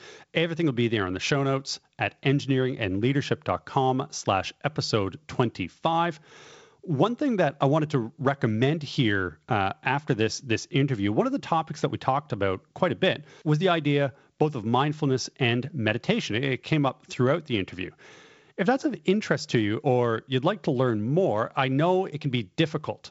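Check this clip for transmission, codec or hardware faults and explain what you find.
Nothing wrong turns up here: the speech comes over a G.722 wideband link, and the light hiss in the upper band and the top end stopping around 7.7 kHz fit that codec running at about 56 kbit/s, all normal for that kind of connection.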